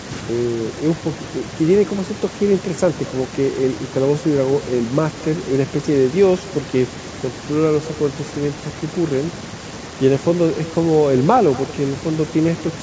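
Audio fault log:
Throughout, echo with no canceller: each stretch of speech is followed about a fifth of a second later by a faint copy, about 21 dB down, as the far end's loudspeaker feeds its microphone and nothing subtracts it before it returns. On a waveform every burst trails a small delayed repeat of itself; a spectrogram shows each syllable's pattern ghosted slightly to the right, weaker and thinner, all under the call processing's 8 kHz ceiling.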